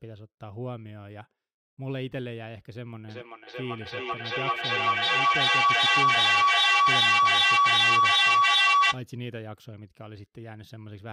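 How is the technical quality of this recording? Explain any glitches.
The recording is marred by one serious fault. From 3.08 to 9.07 s, feedback howl: a microphone-to-loudspeaker loop with gain above unity builds a tone near 1 kHz, pulsing roughly every 0.4 s, peaking about 14 dB over the speech.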